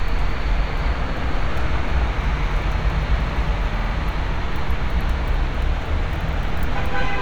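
A short clip of everyday sound with one case of repeated frames: from 3.78 to 3.93 s a 41.3 ms chunk plays three extra times, giving a quick stutter. The encoded stream had that block duplicated, which fits about five compressed frames, and the clip runs 152 ms long because of it.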